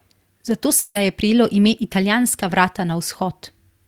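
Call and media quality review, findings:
Long network dropout, 0.79 to 0.98 s: audio stops arriving, and the receiver stretches the last sound into a fading buzz for about 156 ms before roughly 20 ms of silence. Likely a network stall with jitter-buffer concealment; that chunk of the speech is simply gone.

Lost packet rebuilt from error correction, 0.95 to 0.97 s: one 20 ms frame comes through rougher and noisier with no gap. The Opus decoder is playing the low-bitrate in-band FEC copy carried in the next packet, so detail drops for that frame.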